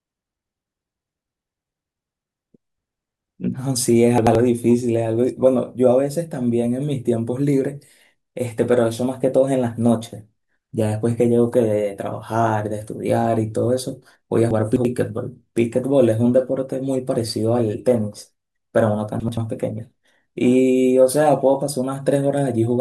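Three spots in this speech have chunks out of order: 4.18 to 4.35 s, 14.51 to 14.85 s and 19.20 to 19.37 s. Each time a roughly 85 ms block plays one, three, then one chunk late, so you get a jumbled blip.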